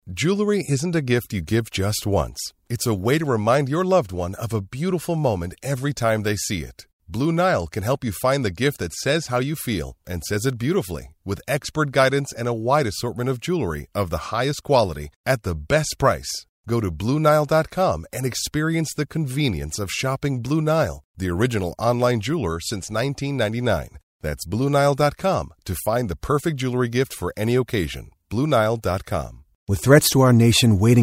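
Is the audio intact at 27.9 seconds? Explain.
Yes, the audio is intact at 27.9 seconds, with no fault at that moment.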